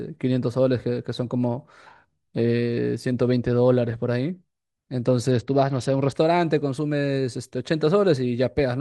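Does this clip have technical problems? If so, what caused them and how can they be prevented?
Yes. From 5.32 to 6.15 s the speech goes dull and gritty, with its treble dulled and grainy noise underneath. This is a Bluetooth SBC bit pool drop: the congested link starved the upper sub-bands, which fits a bit pool falling from 31 to 10, near 77 kbps. Shortening the distance and reducing obstructions and competing 2.4 GHz traffic keeps the link from congesting.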